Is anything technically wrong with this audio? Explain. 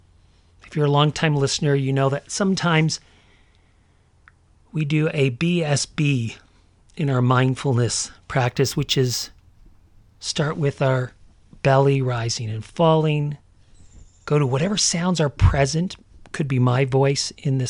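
Yes. From 8.48 to 10.21 s the speech shows imaging from linear upsampling. Straight-line interpolation, consistent with a jump from 22 kHz to 44.1 kHz, dulls the top end and leaves mirrored energy between 11.03 and 22.05 kHz, roughly 25 dB down, heard as a faint metallic shimmer on sibilants.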